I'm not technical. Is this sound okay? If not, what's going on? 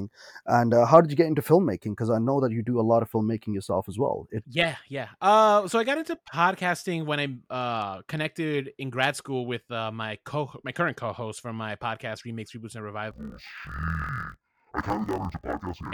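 No. From 13.11 s to the end, the speech drops an octave and sounds doubled and choppy. That's interleaved audio read as planar: stereo samples get split wrongly in blocks of about 23 ms. Unlike slowed playback, the pace stays normal.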